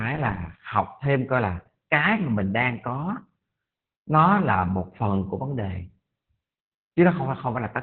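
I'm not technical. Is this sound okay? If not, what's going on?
No. The whole clip has heavy Opus voice compression. Everything above about 4.4 kHz is gone, so the speech sounds muffled, like an old phone call. The squeeze is strong, which fits a very low bitrate. That adds a hoarse, slightly robotic edge.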